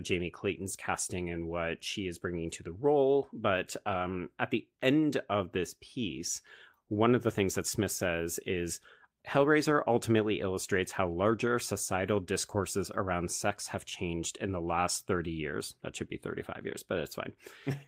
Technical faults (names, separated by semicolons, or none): none